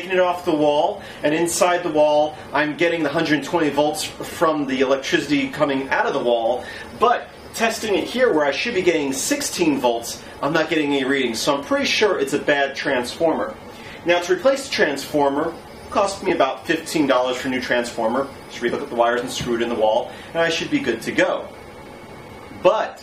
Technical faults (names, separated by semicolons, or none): chunks out of order